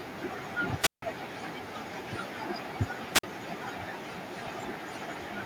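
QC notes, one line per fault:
0.79–1.02 s and 3.13–3.23 s, wireless microphone squelch dropout: the radio link fades, hiss swells, then the receiver's squelch mutes the output for 159 ms and 48 ms. The static build-up before each hole distinguishes this from a clean digital dropout.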